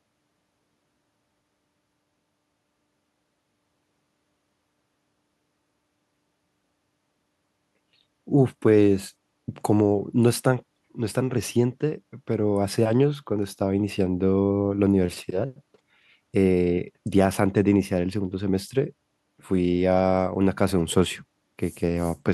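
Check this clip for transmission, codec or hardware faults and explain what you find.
Nothing faulty can be heard at any point in the speech.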